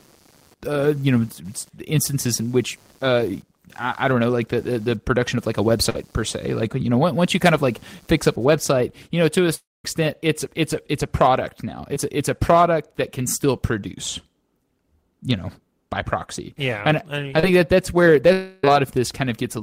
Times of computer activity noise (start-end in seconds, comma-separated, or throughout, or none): 0.00-8.46